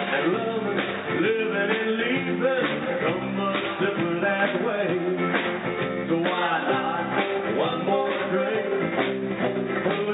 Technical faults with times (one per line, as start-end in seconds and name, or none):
none